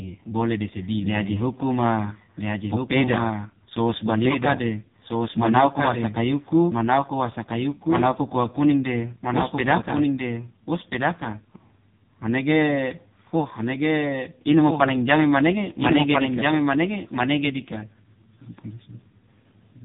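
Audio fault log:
Throughout: doubled audio track. A second full-band copy sits about a second and a half behind, only a few dB quieter, likely from a slower duplicate capture path. The waveform shows repeated envelopes without decay.
Throughout: AMR narrowband mobile codec. Heavy compression, which fits a very low bitrate near 5 kbps, makes the speech buzzy and synthetic. The spectrogram shows nothing above 3.8 kHz.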